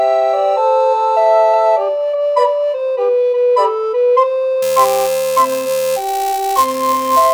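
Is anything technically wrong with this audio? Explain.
Yes. From about 4.62 s to the end at 7.34 s there's buffer tearing. The software filling the playback ring buffer and the hardware reading it have drifted, so their positions cross inside each period. A small slice of every buffer, around a fiftieth of it, still holds audio from roughly 10 ms earlier, with hard joins on both sides. The result is a steady robotic buzz at about 375 Hz, which fits a 128-sample buffer, riding on the sound.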